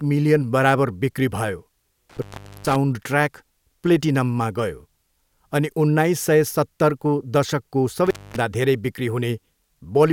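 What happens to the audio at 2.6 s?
At 2.6 s the speech is inside an intermittent contact fault running from 2.10 to 2.76 s: a loose plug or cable opens for about 421 ms, so the sound drops out with crackle at the edges and faint hiss underneath, unlike a clean digital dropout's silence.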